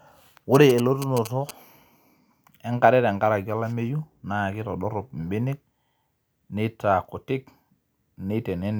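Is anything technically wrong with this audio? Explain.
Yes. GSM signalling bursts appear from 0.55 to 1.51 s. A nearby 2G phone exchanging short signalling bursts induces RF that the audio circuit rectifies, giving a galloping dit-dit-dit of brief 217 Hz buzzes, roughly 10 dB below the speech.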